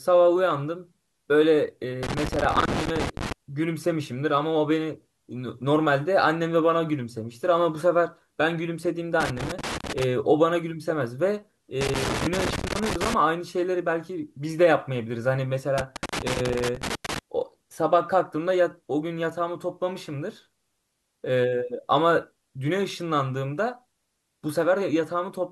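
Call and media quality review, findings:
Irregular bursts of crackle and scratching chopping through the speech at 2.03–3.32 s, 9.20–10.04 s, 11.81–13.14 s and 15.78–17.19 s, each roughly 0.8 to 1.4 seconds long. Loose connector crackle: a worn or dirty contact in the cable or jack path repeatedly making and breaking as it shifts. The signal cuts in and out rapidly, and any DC on the line turns each break into a pop. Check and reseat or replace the connector.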